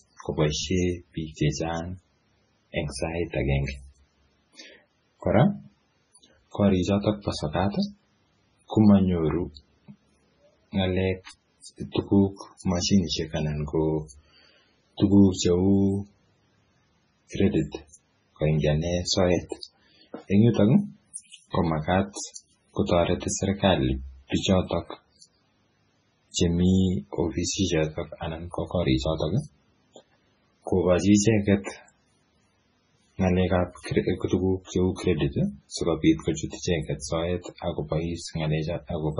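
MP3 compression runs through the whole speech clip. It likely comes from a very low-bitrate MP3 encode, around 16 kbps. Nothing remains above 10.5 kHz, and weak frequency lines drop in and out between frames, giving a heavy watery, swirly texture with chirpy sibilants.

Pre-echo occurs from 11.92 to 11.95 s and again from 14.97 to 15.00 s, spreading about 38 ms and 26 ms. The coding noise for each sharp attack fills the quiet moment before it, so a brief hiss leads in and the onset sounds smeared.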